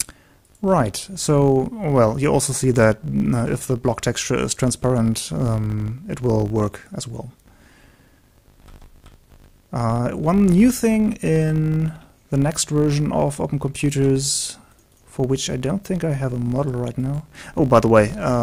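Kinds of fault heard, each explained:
Filter restarted on every block: the filter discards its memory at each block boundary and starts again from silence, so every block opens with a small transient. Here those clicks recur 50 times a second throughout, which fits blocks about 20 ms long, and they merge into a 50 Hz buzz that rises and falls with the level of the sound. A waveform shows evenly spaced glitches at each boundary; a spectrogram shows faint vertical lines every 20 ms plus a 50 Hz harmonic comb.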